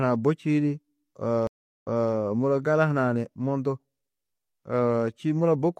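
At 1.47 s the speech stops for about 0.36 s, a stream reconnect: the connection dropped, the player fell silent, then reconnected and started a fresh decoder mid-stream. When the audio returns it jumps back by about 0.3 s, so a short stretch is heard twice before the event ends at 2.13 s. That repeated material sets it apart from a plain dropout, which would resume where it left off or skip ahead.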